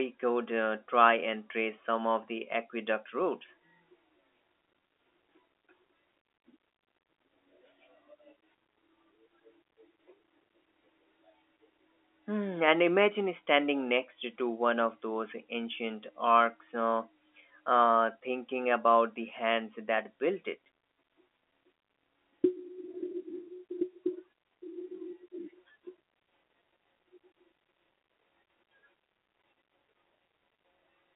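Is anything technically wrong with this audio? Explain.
No, nothing is technically wrong.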